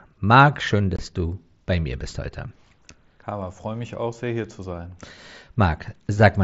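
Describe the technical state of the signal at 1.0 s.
Unconcealed Bluetooth headset packet loss, 0.96 to 0.99 s, just before "du bei mir bist": about 22 ms of speech packets never arrived and were replaced by silence or an idle pattern, leaving a hard-edged gap.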